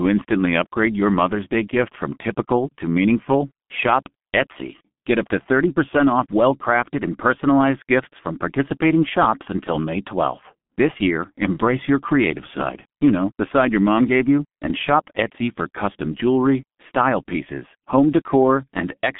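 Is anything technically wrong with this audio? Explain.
Yes. Throughout the speech, the sound carries the damage of the G.723.1 codec. Nothing passes above about 3.7 kHz, and the line band runs roughly 150 Hz to 3.5 kHz. Within that band the codec models the voice in 30 ms frames at a very low rate, which fits about 6.3 kbit/s, so its picture of the voice lags behind quick changes. The result is muffled, hoarse speech with smeared consonants. A plain telephone band-limit would sound narrow but still clean; this sounds rough and blurred as well.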